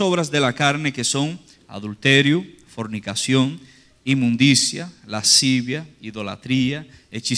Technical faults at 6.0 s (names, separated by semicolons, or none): none